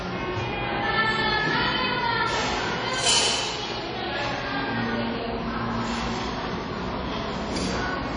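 Throughout, the sound carries a ringing, washy smear and a hiss that swells and fades with the signal, and nothing reaches above about 10.1 kHz. That's likely WMA compression at a low bitrate, around 32 kbps, where long transform blocks spread quantisation noise and weak detail gets zeroed.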